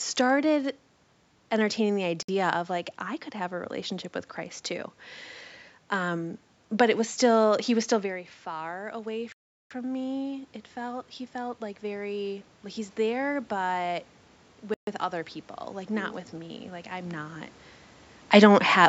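Silence cuts in at 2.23 s, after "entertaining the", for 58 ms. It recurs at 9.32 s for 383 ms and at 14.74 s for 133 ms. Each is likely a Bluetooth stall, where the headphones' buffer ran dry.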